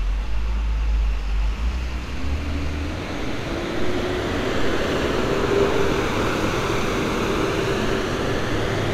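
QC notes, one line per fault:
No faults heard anywhere in this audio.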